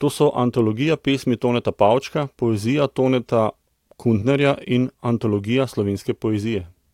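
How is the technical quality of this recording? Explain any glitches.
Listening through this speech recording, nothing stood out as a technical problem.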